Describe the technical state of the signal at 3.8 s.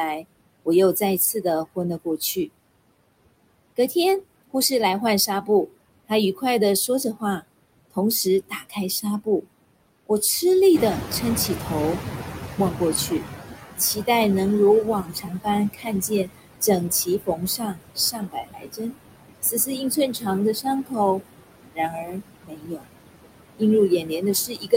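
At 3.8 s the signal shows noise suppressor artifacts, which run through the whole clip. The suppressor estimates the steady background in each frequency band and attenuates those bands frame by frame, here by about 21 dB. The background therefore drops away in the gaps between words and comes back up underneath the speech whenever speech is present, so the noise floor audibly pumps in step with the talking.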